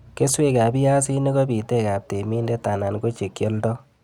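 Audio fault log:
No technical faults can be heard anywhere in the audio.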